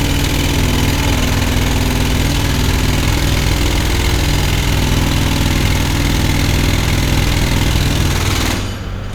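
Nothing in this recording of sounds points to a technical fault, and the signal holds steady with no audible disturbance anywhere along its course.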